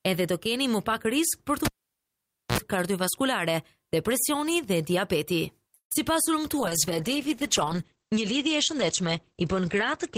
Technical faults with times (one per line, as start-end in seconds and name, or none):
1.65-2.58 cable pulled and plugged in
5.74-5.92 call audio freeze
5.94 short concealed packet loss
6.59-10.17 call bitrate drop